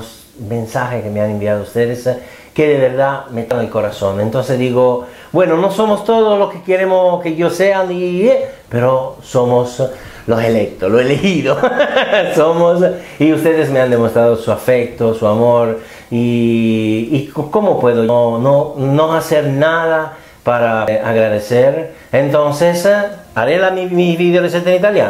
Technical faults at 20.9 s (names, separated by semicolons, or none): damaged data in a compressed stream